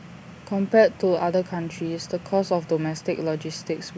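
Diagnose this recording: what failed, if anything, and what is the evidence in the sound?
Nothing in the signal chain appears to have failed: the speech signal is continuous and intact, with no dropouts, distortion, level jumps or other audible defects at any point.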